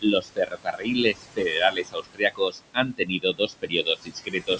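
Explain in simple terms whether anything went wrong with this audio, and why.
Two things went wrong, both caused by the noise suppressor in the call.

First, there are noise suppressor artifacts throughout the clip. The suppressor pushes the room's background noise down hard wherever it thinks only noise is present, so the noise dips between phrases and comes back under the speech. That pumping quality tells it apart from ordinary room noise, which would sit at an even level.

Second, there is speech cut by the noise suppressor, in three stretches: 0.01 to 0.88 s, 1.04 to 2.77 s, and 2.93 s to the end. The suppressor mistook parts of the speech for background and turned them down with it, about half a second in the first stretch and about a second in each of the others. Quiet consonants and word endings sound swallowed or faint. Unlike a dropout, the sound never vanishes completely. It just sinks.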